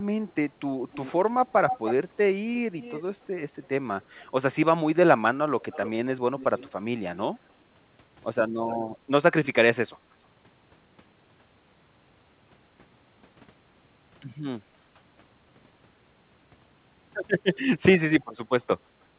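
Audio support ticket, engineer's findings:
Echo leak, far end: canceller failing to remove loudspeaker pickup, likely a speakerphone whose mic feeds its own playback back into the call. Result is a delayed copy of the speech about 300 ms behind, drifting to about 310 ms. Strong at 0.92–1.94 s (about 5 dB under the speech). Around 15 dB down at 2.8–4.25 s, 5.62–7.22 s and 8.62–8.76 s. Faint at 18.21–18.25 s (about 35 dB down). Whole clip band-limited to 4 kHz, consistent with narrowband G.711 A-law.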